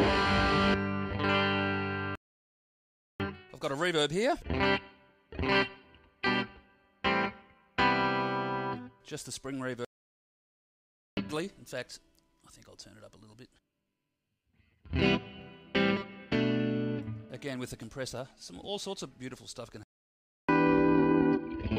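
The player most likely ran short of data or had its thread blocked, producing a playback stall three times. Each time the output drops to silence mid-flow and resumes after the gap: from 2.15 to 3.20 s (about 1.04 s), from 9.85 to 11.17 s (about 1.32 s), and from 19.83 to 20.49 s (about 0.65 s). The sound halts abruptly rather than fading, leaving a dead hole before it picks up again.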